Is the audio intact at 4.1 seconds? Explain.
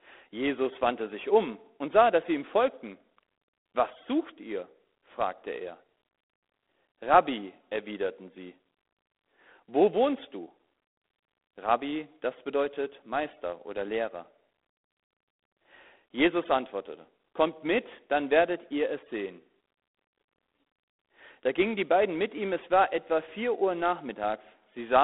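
No. G.726 ADPCM runs throughout, so at 4.1 s the speech carries a harsh, level-following hiss from coarse prediction-difference coding, which fits 24 kbit/s. Nothing above 3.8 kHz remains.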